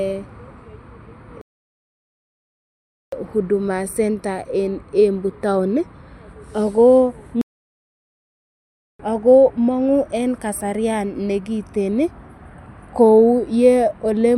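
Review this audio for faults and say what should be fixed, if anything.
The speech cuts out in two playback stalls, from 1.41 to 3.12 s (1.7 s, resuming at "huduma centre en") and from 7.41 to 8.99 s (1.6 s). The likely cause is the player running out of data and going silent until it catches up. A deeper playback buffer would keep it from running dry.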